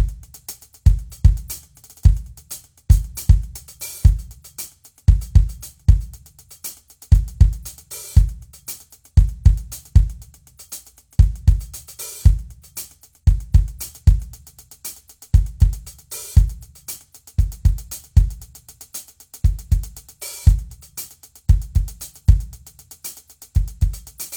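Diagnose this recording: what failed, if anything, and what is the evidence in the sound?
No faults heard in this music.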